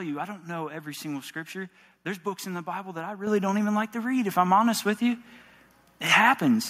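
Microphone volume stepped up at 3.27 s, between "that I" and "don't even like to": the call software judged the microphone too quiet and raised its input volume in a single jump of about 7 dB. Voice and background noise both become louder at once.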